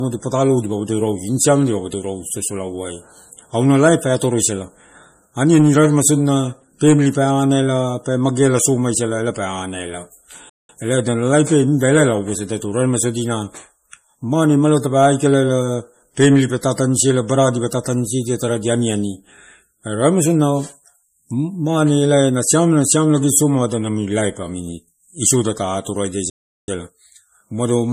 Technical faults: MP3 compression; playback stall

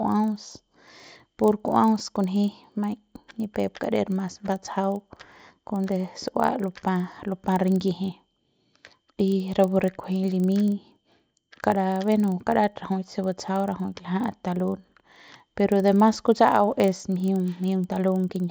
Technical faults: resampler restarted on every block

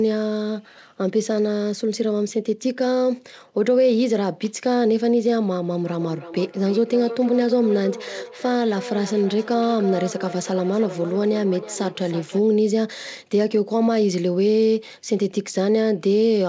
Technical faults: feedback echo between two devices

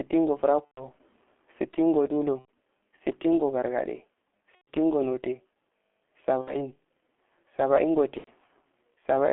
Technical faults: G.723.1 codec; VoIP packet loss concealed by the speech codec

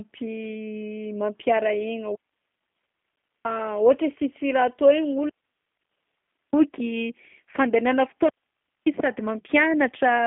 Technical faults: G.729 codec; digital wireless dropout

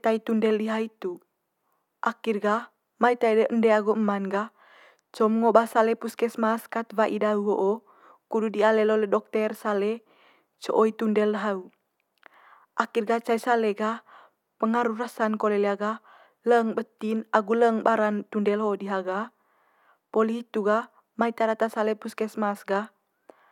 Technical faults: none

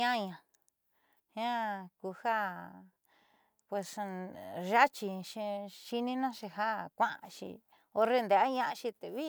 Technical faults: none

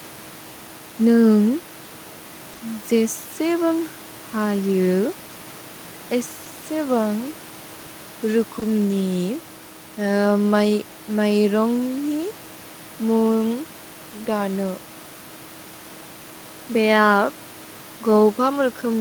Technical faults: short concealed packet loss; lost packet rebuilt from error correction

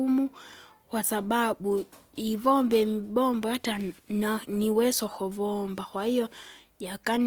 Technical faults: Opus compression

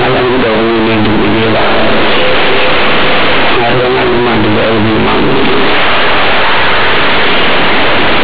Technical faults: companded audio read as linear

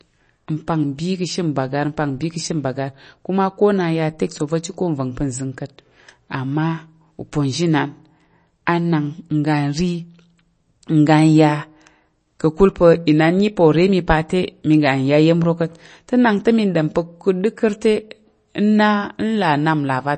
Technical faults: MP3 compression

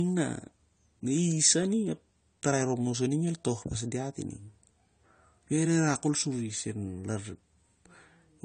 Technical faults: low-bitrate audio saved at a high bitrate

